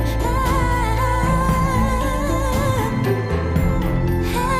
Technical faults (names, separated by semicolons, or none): none